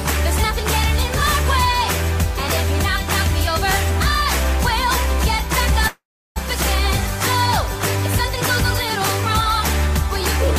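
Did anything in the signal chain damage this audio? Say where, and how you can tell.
Yes. A call audio freeze at the network stage runs from 5.87 to 6.38 s. The last sound trails off, then about 350 ms of silence follows. The audio resumes where it stopped, nothing lost, now 484 ms later. The likely cause is delayed packets draining the jitter buffer.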